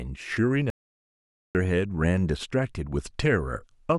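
A short bit of speech with one clear playback stall: at 0.70 s the audio just drops to silence and stays dead until about 1.55 s, so roughly 850 ms of nothing in the middle of the flow. It simply stops and then picks back up. That's most likely the player running dry on buffered data, or its audio thread getting blocked for a moment, leaving nothing to send to the output until it recovered.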